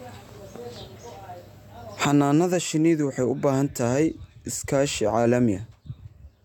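Nothing in this recording stands out as a technical fault; the speech just runs along with no dropouts, glitches or other trouble catching the ear.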